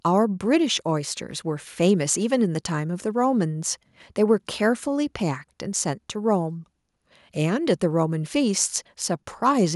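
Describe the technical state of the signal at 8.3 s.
At 8.3 s the speech signal is intact, with no audible dropout, distortion, glitch or other technical fault at that point.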